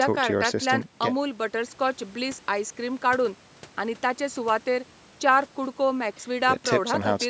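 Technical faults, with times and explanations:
No technical faults detected.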